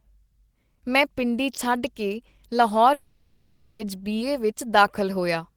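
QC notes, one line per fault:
2.93–3.81 s, long network dropout: for about 0.86 s the speech gives way to a continuation of the last sound, a buzz or hiss that fades rather than dropping to dead silence, and then the talk resumes with that stretch simply absent. This is likely the receiver concealing a long run of audio that never arrived. Unlike a brief packet-loss glitch, the gap lasts close to a second, and unlike a clean mute, it is filled with sound.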